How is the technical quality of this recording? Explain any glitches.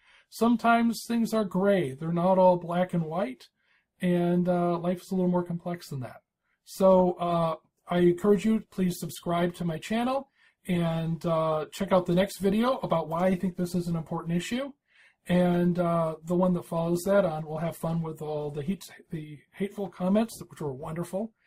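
The recording has one glitch: a stretch of adaptive stream at a lower bitrate from 7.28 to 19.28 s. The stream dropped to a leaner encoding for 12 seconds, consistent with a fall from around 64 to 16 kbit/s Opus, so codec artefacts rise. Unlike a dropout, the quality change is abrupt but leaves no gap.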